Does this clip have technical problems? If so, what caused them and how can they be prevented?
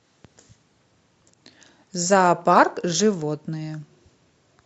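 Yes. Between 1.22 and 1.34 s, frames out of order produce a garbled flutter: two adjacent 60 ms blocks of speech play swapped, consistent with two runs of three frames. Sequence-numbered packets with reordering in the jitter buffer prevent this.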